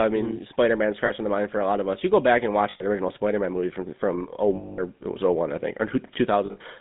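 GSM full-rate codec throughout: the speech runs through a vocal-tract model driven by coarse, regularly spaced pulses, which fits a 13 kbit/s full-rate stream. The result is a plainly audible buzzy, gravelly roughness within a band of about 150 Hz to 3.7 kHz.

Lost GSM frames first occur at 1.06 to 1.11 s, just before "in the mind for". The 40 ms gap is filled by repeating the last good frame, which fits two lost frames, and it sounds like a brief metallic ring. At 2.70 to 2.84 s, after "go back and", 100 ms rings longer. At 4.56 to 4.81 s, between "movie from from" and "it was", 220 ms of held, metallic ring fills the gap. At 6.46 to 6.61 s, 100 ms of losses scattered over 140 ms, with runs of around 40 ms at most, give a rough, metallic ring.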